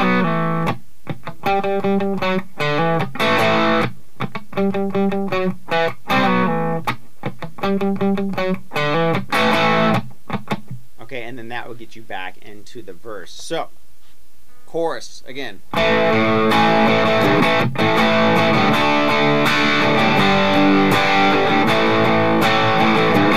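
No technical faults are heard in this audio, so there is nothing to describe in time order.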